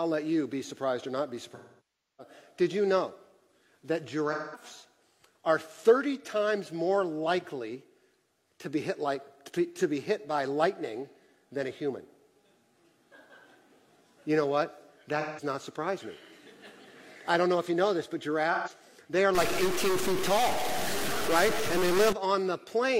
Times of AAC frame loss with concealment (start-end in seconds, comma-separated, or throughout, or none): 1.54-2.34, 4.32-4.64, 15.20-15.44, 18.53-18.70